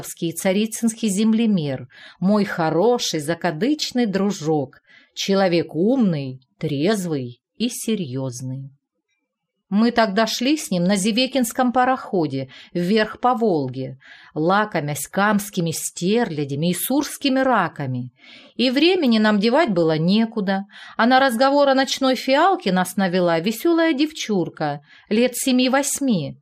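Throughout, the audio sounds dull and gurgling. This is likely MP2 compression, with upper sub-bands switched off and coarse quantisation, which fits about 80 kbps. DAB burbling appears from 3.00 to 3.17 s and at 19.63 to 19.68 s. Reception bit errors corrupt sub-band data, giving brief blips of noise in single sub-bands.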